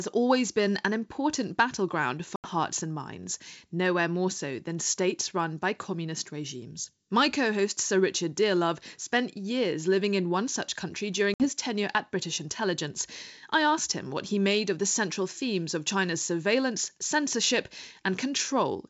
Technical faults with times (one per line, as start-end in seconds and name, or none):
2.36-2.50 packet loss on an ADPCM call
11.34-11.47 packet loss on an ADPCM call